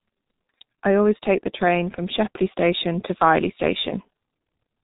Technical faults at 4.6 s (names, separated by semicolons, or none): G.723.1 codec